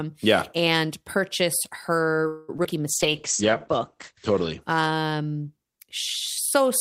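At 2.27 s the sound stalls for about 0.23 s, to 2.50 s. The last sound is held and stretched into a fading buzz rather than dropping to silence. When the audio resumes, it carries on from exactly where it stopped, so nothing is lost and everything after it simply arrives late. That is the signature of a call audio freeze, likely caused by packets being held up in transit until the jitter buffer ran dry. Unlike packet loss, it inserts time rather than removing it.

Just after that come three short concealed packet losses, at 2.56 to 2.60 s, 2.64 to 2.66 s and 2.70 to 2.73 s, spaced about 70 ms apart. In each, a fragment of audio about 20 ms long never arrived. The receiver papered over the gap by extending the previous sound and then blending back into the real signal. Each one is a quick smear or wobble rather than a pause, and the timing does not slip, which separates it from the freeze.

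From 2.91 s to 4.68 s a call bitrate drop sets in. The sound turns rough and watery, and the top end is shaved off as the audio bandwidth shrinks from 20 kHz to 8 kHz. This points to the encoder being pushed from around 32 kbps down to roughly 10 kbps after the connection's bandwidth estimate fell. It stays at its worst for about 1.5 s before the brightness returns. This is a sustained dulling, not a momentary glitch.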